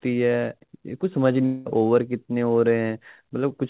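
From 1.46 to 1.67 s the speech turns into a fading buzz while 200 ms never arrives, likely a long network dropout concealed by the receiver.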